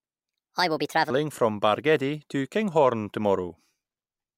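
A section at the wrong speed opens the clip, likely from playback or editing tied to the wrong clock. From 0.00 to 1.10 s the speech runs 1.36 times too fast, rising about five semitones in pitch so it sounds high and hurried.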